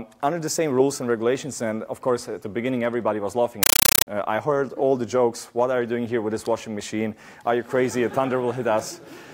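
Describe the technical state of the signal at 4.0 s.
At 4.0 s the signal is a compressed stream played as audio, from 3.63 to 4.07 s. Undecoded bitstream data is treated as samples, giving 8 ms noise bursts separated by silent padding at 31.25 Hz, which fits AC-3 frames. It sounds like chattering static in place of the sound.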